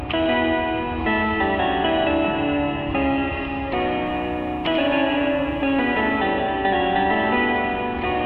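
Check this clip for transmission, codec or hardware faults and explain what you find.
One fault is present in this music clip: video or display buzz, from 4.06 s to 6.19 s. A screen or video cable is coupling interference into the audio path, and the picture refresh imposes its 60 Hz field rate on the signal as a buzz. Above it sits a layer of fine hash from the same source. The buzz lies roughly 40 dB below the music, so it is quiet but audible as a hard-edged hum under the music for about two seconds.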